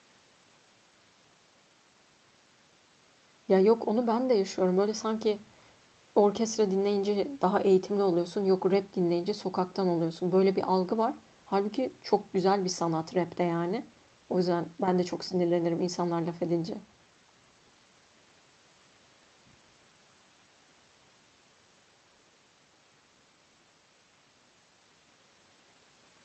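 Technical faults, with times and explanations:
No technical faults can be heard anywhere in the speech. There is nothing to list with a time or an explanation.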